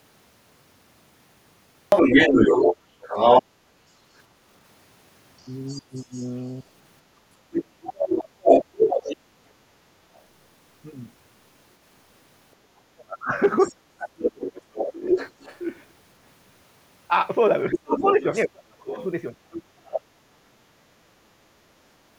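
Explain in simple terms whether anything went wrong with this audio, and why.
Two problems can be heard. The first is the other side's voice leaking through. From 1.9 to 10.2 s a second voice runs alongside the talker, slightly louder than them. It returns from 13.6 to 20.0 s, quieter. The likely cause is an echo canceller that failed to remove the far end's loudspeaker sound.

The second is speech suppressed in double talk. Between 2.3 and 8.5 s the talker's voice dips and breaks up for about a second and a half in total. From 12.6 to 20.8 s it happens again, deeper, for about four seconds. Both sides were talking at once, so the echo canceller likely turned down the real talker too.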